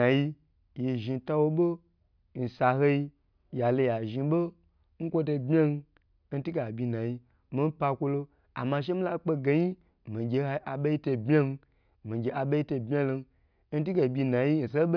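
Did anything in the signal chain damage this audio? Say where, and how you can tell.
No, nothing in the signal chain damaged this speech.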